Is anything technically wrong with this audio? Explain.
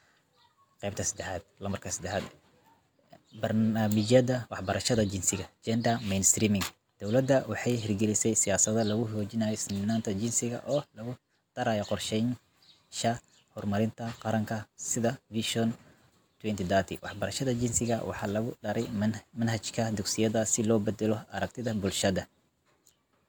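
No, nothing stood out as a technical problem on listening to this speech recording.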